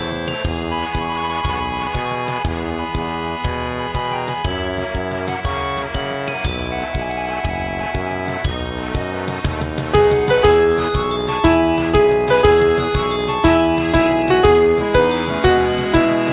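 No technical faults can be heard anywhere in this clip. Nothing in the audio breaks, drops out or changes character at any point.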